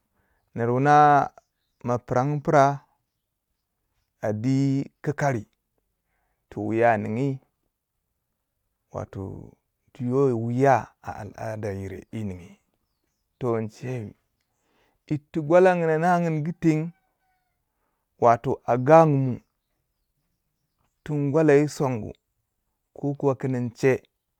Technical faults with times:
none

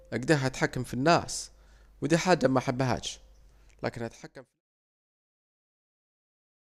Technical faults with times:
none

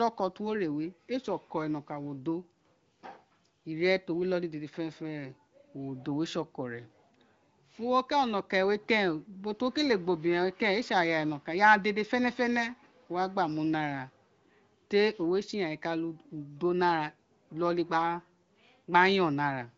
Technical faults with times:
none

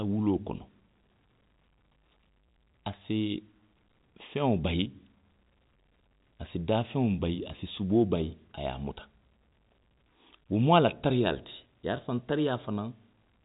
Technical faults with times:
none

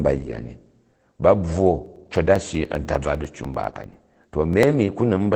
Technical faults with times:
0.00-5.35 Opus voice compression
1.86-4.63 periodic USB or driver dropouts

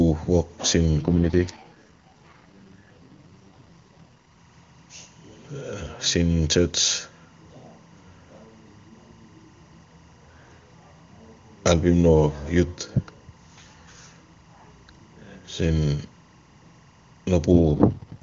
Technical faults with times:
0.00-18.23 timecode bleed
1.00-4.29 AMR rate drop
17.52-18.22 AMR rate drop

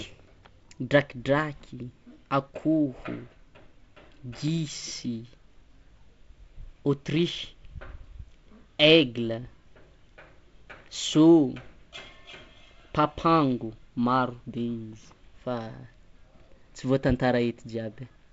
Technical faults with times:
none

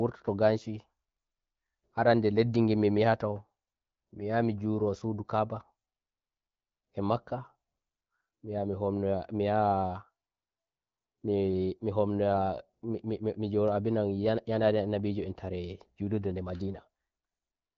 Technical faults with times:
none

